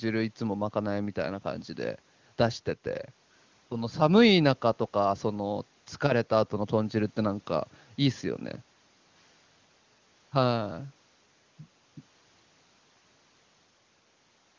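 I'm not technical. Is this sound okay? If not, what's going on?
Yes, nothing is wrong: this is ordinary call audio carried over HD Voice (the AMR wideband codec), so the highest treble stops around 8 kHz, as it normally does on a call.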